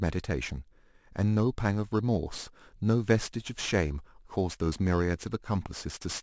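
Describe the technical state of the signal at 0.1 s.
At 0.1 s you're hearing aliasing, and it runs the whole length of the clip. The speech was brought down from a 24 kHz rate to 16 kHz with no low-pass first, so everything above 8 kHz folded back under that line onto pitches unrelated to the original. Those folded components sit roughly 20 dB below the signal, enough to make sibilants sound gritty and metallic, with the spectrum pressed right up against the 8 kHz edge.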